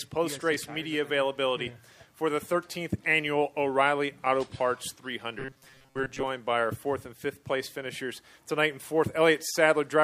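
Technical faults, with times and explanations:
5.39 to 6.26 s, robotic sound from repeated short buffers. The sound turns into a rigid, metallic buzz with a fixed pitch of 134 Hz. The buzz still loosely tracks the changes in the sound beneath it. The likely cause is new audio arriving too slowly, so playback keeps replaying the last fragment while most of the real audio in this stretch is skipped. A fragment about 7.5 ms long, looped over and over, sets that steady pitch.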